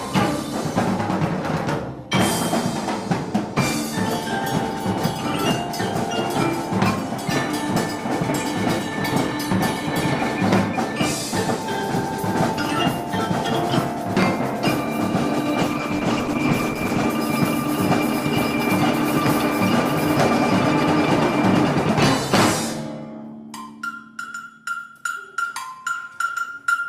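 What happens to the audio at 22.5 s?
Nothing goes wrong at 22.5 s; the audio plays through that moment intact, with no dropout, click or other fault.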